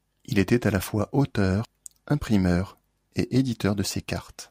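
At 1.65 to 1.68 s the speech breaks briefly from damaged data in a compressed stream: the decoder misreads corrupted frames, loses sync and resumes at the next good header.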